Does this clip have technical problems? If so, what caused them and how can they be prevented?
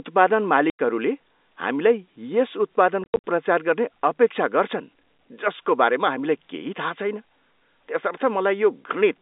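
Yes. Packet loss filled with silence cuts the speech at 0.70 to 0.79 s and at 3.04 to 3.20 s. The receiver played silence in place of missing packets, leaving hard-edged holes. The first is a 90 ms gap, which fits ten-millisecond packets. The second scatters about 150 ms of dropouts over 200 ms, with the longest run 70 ms. Packet loss concealment at the receiver, plus a jitter buffer or forward error correction on the link, would prevent these audible holes.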